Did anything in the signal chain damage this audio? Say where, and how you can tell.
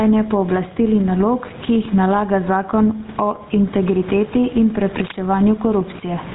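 Yes. Gain pumping runs throughout. The gain swings by around 10 dB as it is pulled down on loud sounds, with room noise about 28 dB below the speech, likely from excessive input gain driving a fast limiter.

GSM full-rate codec damage runs throughout. Nothing is present above 3.8 kHz, and the speech has a plainly buzzy, gravelly roughness that fits a 13 kbps GSM stream's pulse-excited vocal-tract model.

Cable scratch noise occurs from 5.01 to 5.19 s in the analogue wiring: a dense, uneven rustling burst only a little below the speech level, likely from a worn connector shifting.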